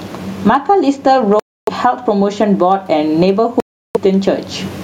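A speech recording in which the input gain was likely set far too high, with a fast limiter clamping down on every loud syllable. The result is gain pumping throughout, a swing of around 20 dB, leaving the speech squashed; the faint room noise sits about 45 dB under the speech. Separately, audio packets likely failed to reach the headphones in time, causing Bluetooth dropouts from 1.40 to 1.69 s and from 3.60 to 3.97 s: silences of roughly 0.3 and 0.35 s, after which the speech resumes as though it had kept playing.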